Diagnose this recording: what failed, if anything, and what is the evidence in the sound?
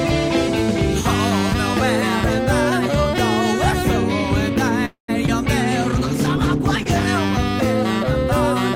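Network stage: from 4.85 to 5.10 s the music stalls, trailing off and going silent for about 0.11 s, then resumes intact. Likely a call audio freeze, where delayed packets drained the jitter buffer.

Network again at 5.26–5.30 s: about 20 ms went missing, a short concealed packet loss patched by extending the previous sound before blending back, leaving a brief smear.

Codec stage, 5.83–7.14 s: a call bitrate drop from 32 to 12 kbps, held low for about 1.2 s. Opus coded coarsely, so the music turns rough and dull.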